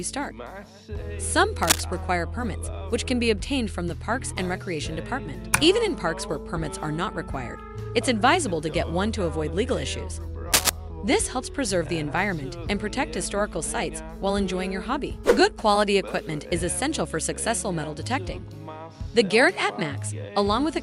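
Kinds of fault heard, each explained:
Cable scratch noise at 1.63–1.81 s and 10.53–10.70 s: two brief bursts of dense, ragged scratching, each under a fifth of a second and about 5 dB louder than the sound beneath, likely from a worn cable or connector shifting so its contact resistance fluctuates rapidly.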